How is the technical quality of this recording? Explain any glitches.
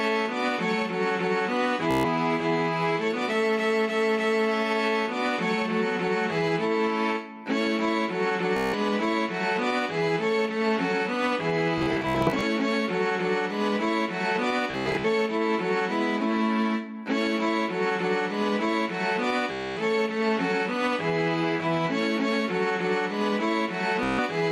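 Technical quality is compromised by two faults: gain pumping across the whole recording and six bursts of Bluetooth stutter.

Gain pumping runs throughout, with the level swinging by roughly 5 dB as loud sounds pull it down and it then recovers. The likely cause is input gain set far too high, with a fast limiter or compressor clamping each peak.

Bluetooth stutter occurs at 1.91–2.05 s, 8.57–8.75 s, 11.78–12.43 s, 14.71–15.05 s, 19.52–19.80 s and 24.03–24.20 s. Lost or late packets made the receiver replay its last short buffer, giving a buzzing repeat before the sound resumes further along. The bursts at 11.78 s and 14.71 s break into several separate runs.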